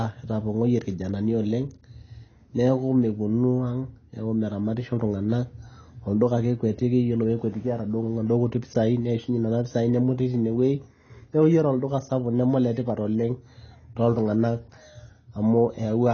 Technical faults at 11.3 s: AAC compression

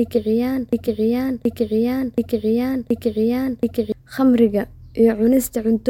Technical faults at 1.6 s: broken-record loop

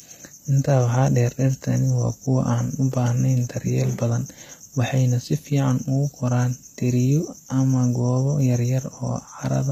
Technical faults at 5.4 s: HE-AAC compression

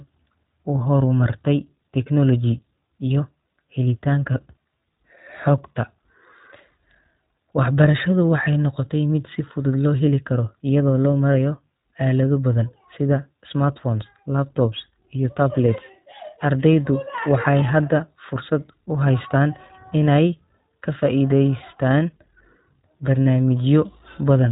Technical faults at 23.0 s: iLBC codec

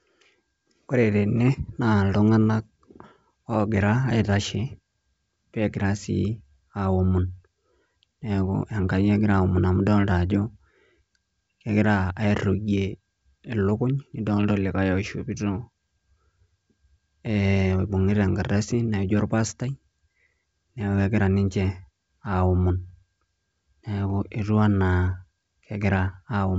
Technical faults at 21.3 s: none

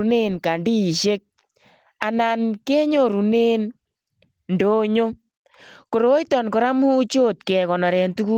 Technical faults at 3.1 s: none

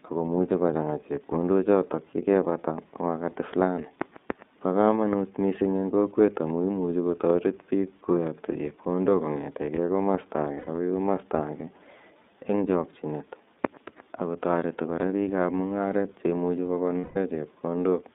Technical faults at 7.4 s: iLBC codec

